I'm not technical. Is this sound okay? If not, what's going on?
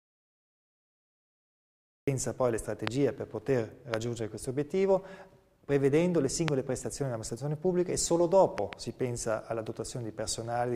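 No. The audio starts with an audio dropout to silence: from the very beginning until 2.08 s there is complete, dead silence, with not even faint background hiss. That points to a cut signal, likely a lost connection or a mute, rather than a quiet passage.

After that, there are loud pops at 2.87 s, 3.94 s and 6.48 s, and a quick double pop between 8.58 and 8.75 s. Each is a short, sharp click on top of the sound, which continues underneath without a gap. The likely cause is an electrical jolt from a plug, switch or static.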